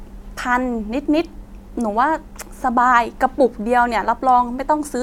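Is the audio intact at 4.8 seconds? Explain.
Yes, the speech at 4.8 seconds plays through intact, with no audible fault at that point.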